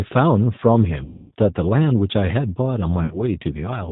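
The whole clip carries the sound of the G.729 codec, which fits an 8 kbit/s stream. The speech is rebuilt from a vocal tract filter and a pitch predictor with sparse pulses. Nothing above 4 kHz survives. The voice sounds rough and slightly synthetic throughout.

From 1.04 s to 1.32 s, about 270 ms of audio is missing. This is VoIP packet loss concealed by the speech codec, consistent with several consecutive packets dropping. The decoder stretches its last pitch and filter into a buzzy tone or a coloured noise that fades. The speech stays weak just after. At 3.05 s to 3.20 s, a shorter 60 ms gap does the same, with a brief stretched sound and a weak recovery.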